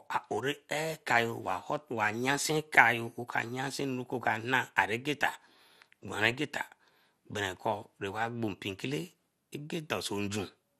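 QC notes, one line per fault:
Throughout: MP2 compression, likely the cause of the dull, granular sound with a gurgling edge on the speech. Too few bits leave upper sub-bands switched off or flickering and the remaining bands coarsely quantised, which fits a rate around 80 kbps.
6.31 to 6.33 s: DAB burbling, a brief burst of short noise blips in single sub-bands. Bit errors, at a rate of a small fraction of a percent, slipped past error correction into the MP2 audio data, which fits about two corrupted frames.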